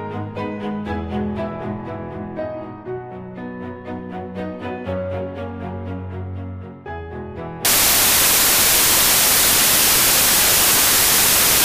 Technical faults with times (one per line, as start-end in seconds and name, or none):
7.65-11.65 samples built from the wrong bytes